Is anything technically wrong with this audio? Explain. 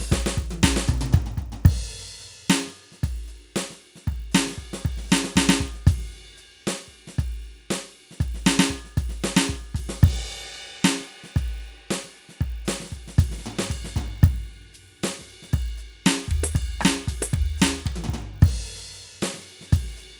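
Yes. The music has a resampler restarted on every block, throughout. Each 20 ms block was converted separately, likely from 24 kHz to 48 kHz, without its neighbours' samples. Every block edge picks up a small error. The result is a 50 Hz buzz that rides on the music.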